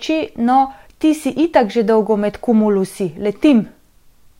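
Periodic USB or driver dropouts mark this speech clip, about four ticks between 0.42 s and 3.49 s, spaced 1.02 s apart. Something blocks the audio path at that fixed interval, and a tiny fraction of a millisecond of sound is skipped each time, leaving a small click.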